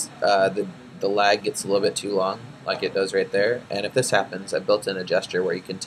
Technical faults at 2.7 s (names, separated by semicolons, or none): none